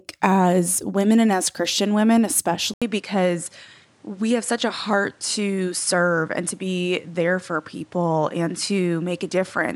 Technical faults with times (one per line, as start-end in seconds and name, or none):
2.74-9.75 input switched to a poorer device